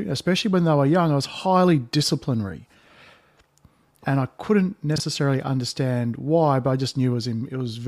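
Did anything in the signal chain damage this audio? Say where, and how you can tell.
Yes. Chunks out of order at the buffer stage, 4.96 to 5.0 s: one 20 ms block plays one slot late, giving a brief jumbled moment with three hard joins.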